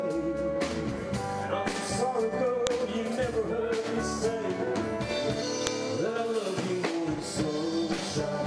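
At 2.67 s and again at 5.67 s a sharp click cuts through the sound: a file header played as audio. The two events sit 3 s apart, which points to the stream being assembled from 3-second WAV pieces whose header bytes were never stripped, so those few dozen bytes are decoded as samples. Each burst lasts about a millisecond. On a waveform it shows as an isolated spike unrelated to the surrounding signal, and on a spectrogram as a thin vertical broadband line.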